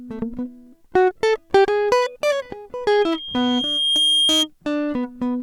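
At 2.89 s a loudspeaker feedback squeal sets in over the music: a single tone at 3.2 kHz that swells over about a second to roughly 5 dB above the music. The microphone is re-amplifying its own loudspeaker output until the loop breaks at 4.48 s.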